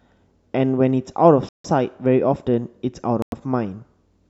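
At 1.49 s the speech drops to silence for about 156 ms, then again at 3.22 s for about 99 ms, each time picking back up. Likely a Bluetooth stall: the headphones' buffer ran dry waiting on resent packets.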